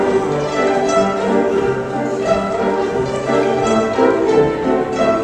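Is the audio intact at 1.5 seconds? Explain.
Yes, the audio is intact at 1.5 s, with no dropout, click, distortion or other fault at that moment.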